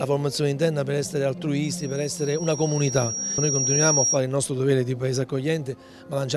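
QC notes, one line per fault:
1.64–4.20 s, loudspeaker feedback squeal: a piercing single tone near 5.7 kHz swells over roughly two seconds until it sits about 5 dB above the programme, then stops. A microphone is hearing its own loudspeaker, and the loop gain exceeds one at that frequency.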